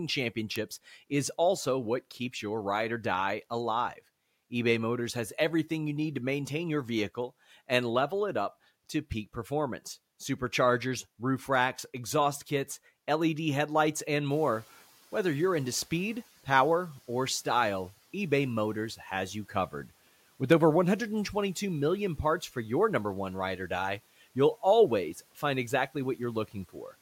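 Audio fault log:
14.30–16.28 s, noise suppressor catching up: the room noise jumps by about 15 dB near 14.5 s and the suppressor's noise estimate lags, so the noise comes through with less reduction at first before it sinks by about 8 dB over roughly two seconds as the estimate adapts.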